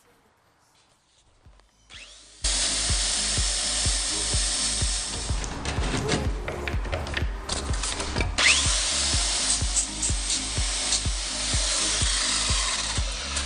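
Until 2.44 s a faint leak, roughly 25 dB down, is heard; then the sound snaps back, likely an audio dropout to a faint residue.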